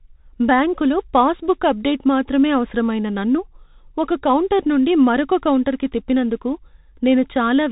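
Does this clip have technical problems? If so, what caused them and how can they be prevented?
Yes. Bluetooth CVSD headset codec throughout: nothing above 3.8 kHz survives, and a spectrogram shows a hard ceiling there. The one-bit delta modulation, consistent with a 64 kbps link, leaves scratchy sibilants and granular hiss under the speech. Prevent it by recording through a wired microphone or a wideband Bluetooth profile instead of the headset's narrowband mode.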